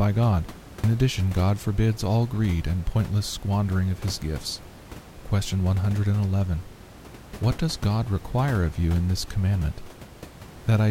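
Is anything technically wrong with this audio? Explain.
No, nothing is technically wrong; the only thing beyond the speech is the room's own background noise, sitting about 19 dB below it and belonging to the recording itself.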